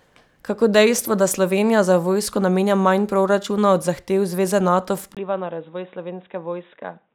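At 5.15 s, after a 20 ms gap, speech goes dull, about 10 dB quieter, with nothing above 3.8 kHz: likely an input switched to a poorer device.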